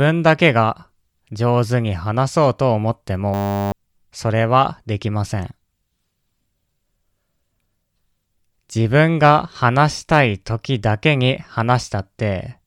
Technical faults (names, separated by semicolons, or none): system hang loop